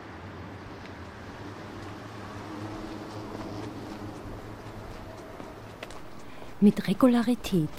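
At 4.91 s, chunks play out of order. One 5.8 ms chunk arrives a chunk late and swaps places. The three hard joins make a brief jumbled moment.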